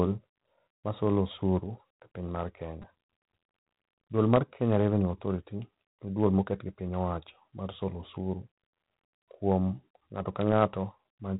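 A harsh, rasping hiss rides on the speech from start to finish, rising and falling with its level, and nothing above 3.9 kHz comes through. This is G.726 ADPCM at 24 kbit/s: with only three bits per sample coding the prediction error, the quantisation noise is plainly audible.

At 2.82 s there is a brief buzzing click as one tiny slice of sound repeats three extra times with hard joins. This is a repeated buffer: new audio arrived late, so the last block, which fits a buffer of about 5 ms, was replayed, and roughly 15 ms of audio was lost.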